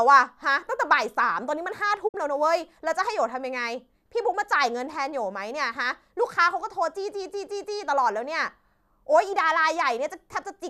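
At 2.07 s the receiver stops getting decodable frames, a digital broadcast dropout consistent with about two frames failing, and mutes. The speech fades out over 20 ms into a brief hole, roughly 48 ms of programme lost, returning at 2.16 s.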